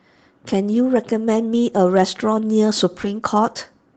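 Speech heard over an Opus call path, with the high end stopping near 8 kHz. Hard clipping appears from 1.83 to 2.02 s. The level there overdrives by about 3 dB, so the loudest peaks are sliced flat. Those flat tops add harmonics high in the spectrum. The result is a crackly edge on the peaks. At 3.01 to 3.05 s comes a short concealed packet loss. About 20 ms of audio failed to arrive in time. The decoder filled the hole by extending the preceding sound, then blended back to real audio. It is heard as a brief smear. Overlapping its end, at 3.03 to 3.05 s, is a lost packet rebuilt from error correction. One 20 ms packet was recovered from a low-bitrate copy carried in the next packet. There is no gap there. That frame simply sounds rougher and noisier than its neighbours.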